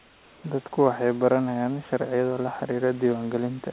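From 0.00 to 0.44 s, before the speech begins, the room background gives way to a smooth, featureless hiss about 3 dB quieter than the real room noise, which elsewhere sits about 28 dB below the speech. This is comfort noise in place of the background, likely from discontinuous transmission: with no speech detected, the sender went quiet and the receiver synthesised shaped noise. Like the rest of the audio, it is band-limited to 4 kHz by the narrowband call path.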